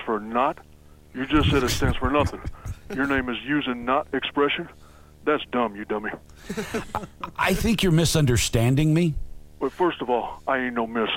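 A low buzz at 75 Hz with hash above it runs throughout, roughly 30 dB under the sound: video or display buzz, from a screen or video cable coupling into the audio.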